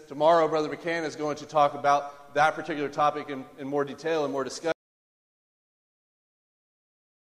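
At 4.72 s the sound stops abruptly in mid-flow and never returns: everything from there to the end is silence, without even the room tone that ran beneath the earlier audio. This is an audio dropout to silence. The input signal was likely lost, through a disconnected source, a broken link or an accidental mute, while the recorder kept writing silence, so whatever followed that moment is simply missing.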